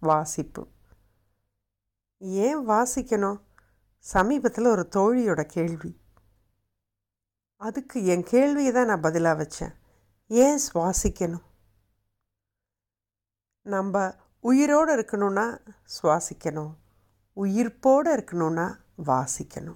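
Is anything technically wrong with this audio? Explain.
Yes. Hard clipping occurs at 0.10–0.13 s and 17.87–17.92 s. Speech peaks exceed full scale by about 1 dB and about 0 dB, so they are flattened, producing brief crackle.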